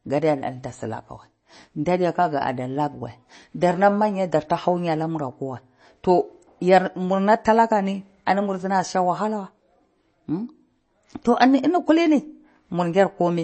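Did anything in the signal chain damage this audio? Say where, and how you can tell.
Yes. Throughout, the speech sounds watery and dull, with nothing above 8.3 kHz. This is likely MP3 compression at the codec stage, fitting roughly 32 kbps.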